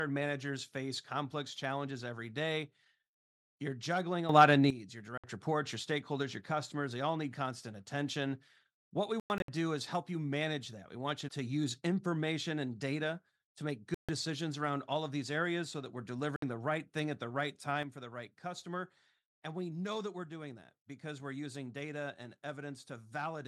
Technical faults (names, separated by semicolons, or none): sudden gain jump; Bluetooth dropout